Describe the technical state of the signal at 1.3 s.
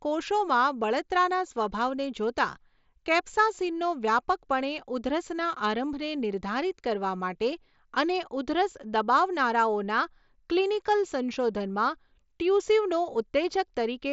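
At 1.3 s the speech is intact, with no fault present, and it carries the normal wideband Bluetooth mSBC headset band, with nothing above about 7.7 kHz.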